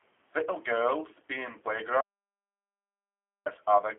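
From start to finish the speech is thin, boxed-in and slightly rough, with a buzzy, synthetic edge that is plainly audible. Nothing reaches above about 3.7 kHz, and the low end thins out below roughly 250 Hz. This is G.729 codec damage, most likely G.729A at a rate that fits 8 kbit/s. The codec rebuilds each short frame from a vocal-tract filter, a pitch predictor and a few coded pulses, not from the actual waveform.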